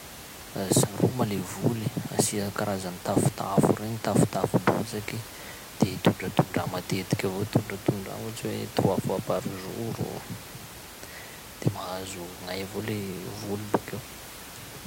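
No technical faults can be heard in this speech recording. The room noise sits in the background about 15 dB below the speech, which is part of the recorded space rather than a fault.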